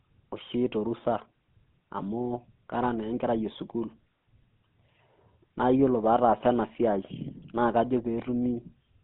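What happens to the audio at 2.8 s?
At 2.8 s the speech carries GSM full-rate codec damage, present throughout. Regular-pulse excitation through a vocal-tract model leaves a plainly audible buzzy, gravelly roughness. A spectrogram shows energy confined to about 150 Hz to 3.6 kHz, fitting a 13 kbps phone line.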